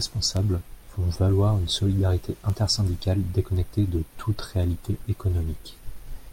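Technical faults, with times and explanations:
0.37 to 5.69 s, word clock ticks: about seven sharp ticks of uneven strength cut through the speech at a steady rate of roughly one per second. The digital link is read by a device on its own clock, not locked to the sender's, and the two clocks differ by something like 20 parts per million. Each time they slide a full sample apart, a few samples are misread and one is dropped or repeated, leaving a brief click at that instant.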